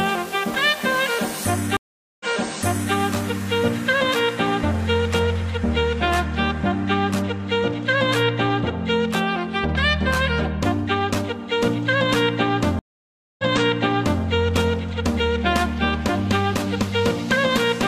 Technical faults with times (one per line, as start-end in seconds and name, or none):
1.77-2.94 stream reconnect
12.79-14.22 stream reconnect